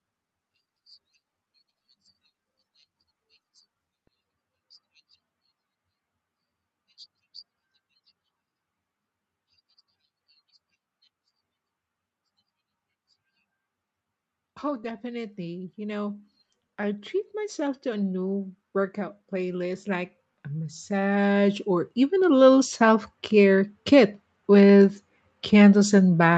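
Automatic gain rising occurs first from 14.6 to 16.24 s, where the level swells by about 4 dB, and again from 16.77 to 24.95 s, a much longer climb of about 15 dB. In each case the automatic gain control judged the input too quiet and pushed its gain upward step by step, so the speech and the background noise beneath it grow louder together, heard as a slow, steady swell rather than a jump. The top end of the speech stops around 8 kHz throughout.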